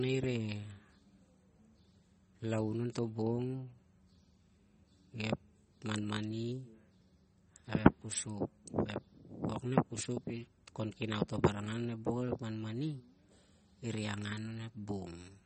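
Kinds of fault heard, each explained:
MP3 compression: Throughout, the speech stops dead at 8.4 kHz and has a watery, swirly texture as weak frequency components drop in and out between frames. The cause is likely low-bitrate MP3 encoding, and the plainly audible damage fits about 32 kbps.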